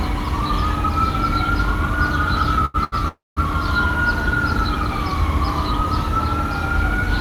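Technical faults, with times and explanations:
2.65–2.76 s and 2.84–2.94 s, short stall from a late packet: a packet arrived late and the jitter buffer emptied, so the last sound was stretched 86 ms, then 80 ms, before resuming with nothing lost.
3.08–3.39 s, call audio freeze: the sound is held, fades out, then drops to about 190 ms of silence, inserting 285 ms of gap in all before continuing intact. This is likely packets delayed in transit draining the jitter buffer.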